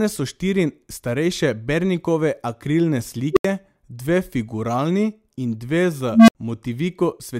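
An unstable filter breaks into the speech at 3.33 s and again at 6.11 s. A recursive filter's feedback is feeding its own output back with too much gain, so a tone swells instead of dying away. At 3.33 to 3.45 s a squeal around 400 Hz climbs to clipping within 36 ms, then overflows and cuts out into 80 ms of silence. At 6.11 to 6.35 s a lower tone near 200 Hz builds more slowly, over 173 ms, before a 69 ms silence while the filter resets.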